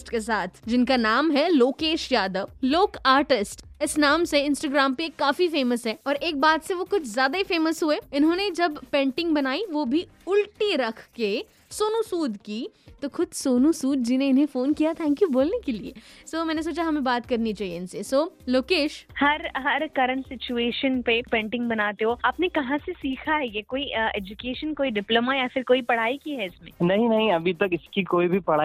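Nothing in the audio stands out as a technical fault at any point, so there's nothing here to flag.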